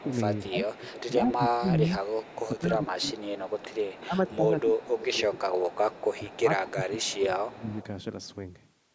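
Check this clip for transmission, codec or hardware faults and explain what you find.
Two faults run through this speech clip: speech suppressed in double talk, and echo leak.

Speech suppressed in double talk occurs at 0.0 to 0.55 s, 1.21 to 3.15 s, 3.96 to 5.32 s and 6.24 to 7.71 s. The voice dips by about 10 to 20 dB, deepest around 4 to 5 s. Both sides were likely talking at once, so the echo canceller turned the near talker down too.

Echo leak runs from 0.0 to 1.35 s and from 2.03 to 7.84 s. A faint copy of the voice trails it by 185 ms, about 20 dB below the speech. A loudspeaker's echo was likely not fully cancelled and was sent back.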